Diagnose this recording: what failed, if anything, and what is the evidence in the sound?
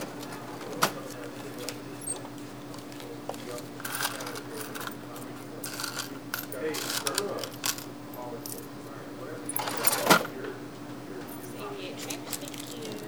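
Low bit depth without dither runs through the whole clip: quiet passages go gritty and the faintest tails sputter or drop out, with grain that tracks the sound, sitting roughly 25 dB down. Likely a sample-format conversion truncating to about 9 bits without dither.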